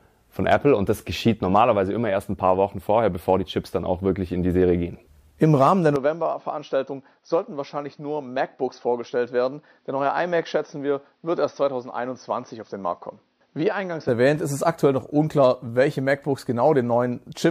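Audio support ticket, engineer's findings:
Input switched to a poorer device, likely a mid-recording change of capture source, 5.96 to 14.08 s. The new device cuts the band at 6 kHz, so the sound turns dull and boxy, with nothing above that. Level drops by about 5 dB. A new noise floor sits far below the signal. No gap at the switch, so the change is abrupt. Full band and the original level return at 14.08 s.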